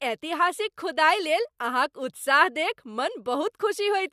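Speech with no audible faults.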